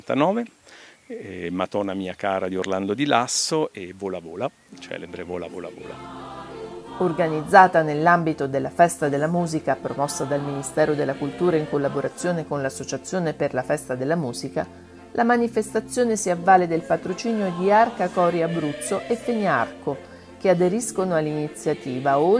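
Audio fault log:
Nothing stood out on listening to this clip.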